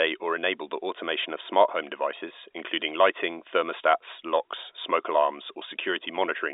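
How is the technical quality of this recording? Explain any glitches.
No glitches or faults audible.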